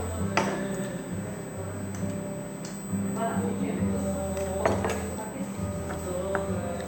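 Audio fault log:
Throughout: USB whine, a steady, fixed-pitch tone at 8 kHz sitting about 15 dB below the sound itself. The pitch gives away the source. A USB bus schedules its traffic in 125 microsecond microframes, and the current drawn at that rate couples into the audio path through shared power or ground. The result is a constant 8 kHz line that does not follow anything in the recording.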